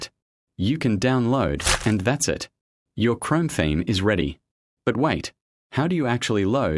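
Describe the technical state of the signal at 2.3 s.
At 2.3 s the signal is intact, with no dropout, distortion, glitch or other audible fault at that moment.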